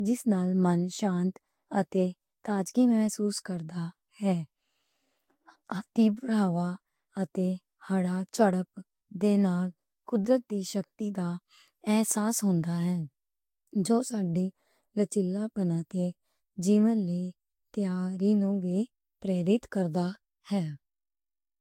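From start to finish the speech carries generation loss. It has that swirly, watery quality, sibilants and consonant attacks smeared, and a hollow tone with gaps in the spectrum. Nothing comes through above 16.6 kHz. The likely cause is a lossy encode repeated about three times, each pass requantising on a shifted frame grid so the damage builds. The character suggests Vorbis at something like 59 kbit/s, but it sounds worse than one pass would leave it.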